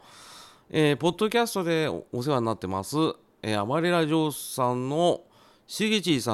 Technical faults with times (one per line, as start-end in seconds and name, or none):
none